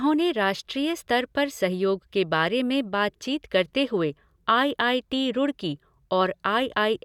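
A speech recording with nothing technically wrong with it.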